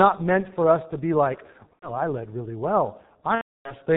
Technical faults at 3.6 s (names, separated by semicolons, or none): G.723.1 codec; VoIP packet loss concealed by the speech codec